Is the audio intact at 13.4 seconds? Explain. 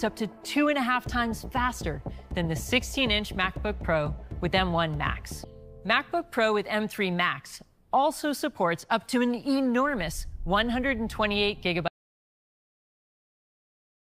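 No. At 13.4 seconds you're in the middle of an audio dropout to silence that starts at 11.88 s and runs right through to the end of the clip. The sound cuts off abruptly, and what follows isn't quiet room tone but dead digital silence. The likely cause is that the input got lost, through a dropped device, a broken link or a stray mute, while the recorder kept writing silence, so whatever happened there is simply gone.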